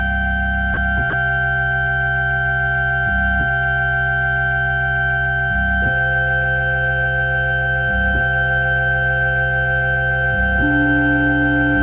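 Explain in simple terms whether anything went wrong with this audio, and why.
Yes, two brief gaps. At 0.74 s and again at 1.1 s, the sound drops out for about 30 ms and is replaced by soft steady noise. This is likely sound dropped by the voice detector, which mistook real sound for background and filled in comfort noise.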